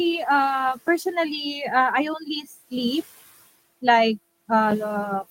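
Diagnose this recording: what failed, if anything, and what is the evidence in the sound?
A block of digital silence at 0.88 s points to the driver or buffer stage. The speech drops to silence for about 5.3 ms and returns with no fade. It sounds like a tick. The length fits one unfilled 256-sample buffer.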